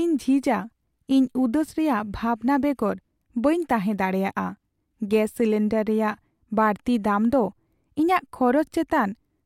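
Chunks out of order between 1.69 and 1.71 s in this speech recording: a 10 ms chunk lands one chunk late, so it plays just after the piece that should follow it. Nothing goes missing, but the swapped pair leaves three abrupt boundaries where the waveform jumps instead of continuing smoothly. Those discontinuities come through as a tiny scrambled moment, lasting about 20 ms, in the speech.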